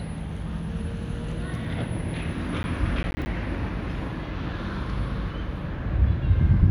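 An everyday sound recording with processor overload crackle from 2.63 to 3.26 s. Several short buffers, roughly 10 ms each, miss their deadlines. Each drops to silence, giving gritty crackle.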